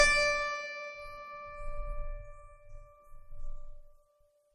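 Throughout the music, nothing sounds above 13.1 kHz, and the top end is dull and thin. This is likely low-bitrate audio saved at a high bitrate. A coarse MP3 encode, which fits about 32 kbit/s, was re-saved far higher. That cannot restore the lost detail.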